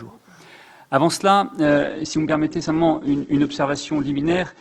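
At 1.65 s the audio abruptly loses its top end, with nothing above 8.2 kHz through to the end and a thinner, more artefact-laden texture, yet no gap. This is an adaptive stream at a lower bitrate, consistent with Opus falling from 64 to 12 kbit/s.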